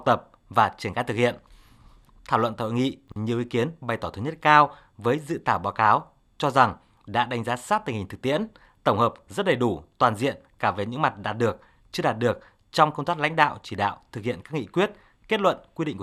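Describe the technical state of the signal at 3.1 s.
Chunks out of order between 3.08 and 3.16 s, just after "luận tại hội nghị" and before "nhiều ý kiến bày": a 40 ms block arrived one chunk late and plays after its successor. Nothing is missing, but the swapped order leaves three hard joins, heard as a brief jumbled stutter.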